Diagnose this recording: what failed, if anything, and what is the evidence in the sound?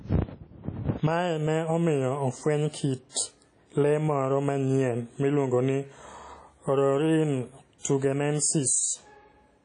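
The codec stage failed, most likely through WMA compression. Throughout the speech, transients ring and smear while a hiss swells with the signal. A spectrogram shows nothing above 10.1 kHz and patchy holes where weak components were discarded, which fits a bitrate around 32 kbps.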